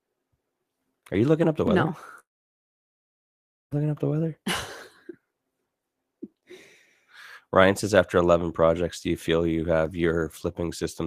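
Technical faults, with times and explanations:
1.67 s and 9.86 s, dropped samples: A sharp single click just after "you looking up the" and again after "do you feel you", likely from a fraction of a millisecond of samples missing, so the waveform steps abruptly between values. A spectrogram shows a thin vertical line.
2.19 to 3.73 s, long network dropout: About 1.5 s of audio likely never arrived. The last sound is briefly carried on as a fading buzz, then almost silence remains until the audio returns at "up the weather", with the lost stretch gone. The waveform shows a flat gap, and the spectrogram goes blank.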